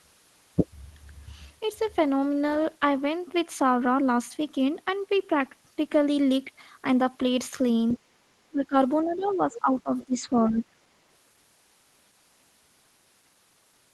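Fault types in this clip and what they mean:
Other side's voice leaking through: A faint second voice surfaces under the talker in short scraps, at 7.88 to 7.99 s, 9.11 to 9.34 s, 9.52 to 9.61 s and 9.99 to 10.05 s. It sits roughly 15 to 30 dB below the main speech. The likely cause is far-end audio from the talker's loudspeaker reaching the microphone, with the echo canceller failing to remove all of it.
Background gated by the echo canceller: From 8.03 to 8.18 s, the room tone under the speech dips by about 10 dB for roughly a sixth of a second, then comes back. While the loudspeaker was active, the echo canceller clamped the microphone signal hard to block echo. The background fell with it and recovered once the canceller released, leaving a brief hollow gap rather than a steady floor.
Speech suppressed in double talk: The talker's own voice sags and chops at 8.5 to 8.75 s, through most of 9.05 to 10.28 s, and at 10.49 to 10.71 s. 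It drops by something like 15 to 20 dB in places and loses presence. This overlaps the moments when the far-end voice leaks in. Both sides were likely talking at once, and the canceller, unable to tell local speech from echo, attenuated everything together.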